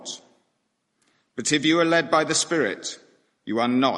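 Nothing goes wrong anywhere in this audio, so there's no technical fault to point out here.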